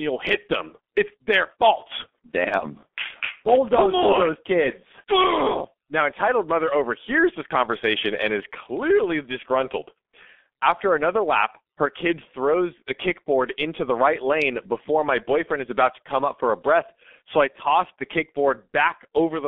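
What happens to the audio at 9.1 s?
At 9.1 s the speech carries G.723.1 codec damage, present from start to end. The band is squeezed to roughly 250 Hz to 3.5 kHz, and the coarse, slow-updating voice model fits a rate near 6 kbit/s. Speech sounds muffled and hoarse, with smeared consonants.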